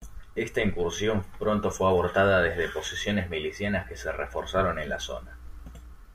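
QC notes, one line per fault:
3.66–5.93 s, mains hum: after "fue abortada desde posiciones" a steady 60 Hz tone, roughly 15 dB below the speech, leaks in from a ground loop or nearby transformer, drawing a flat spectrogram line.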